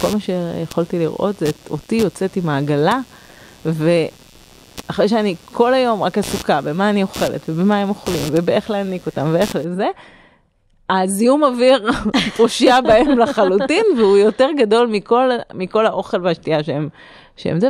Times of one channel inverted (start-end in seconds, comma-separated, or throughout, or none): none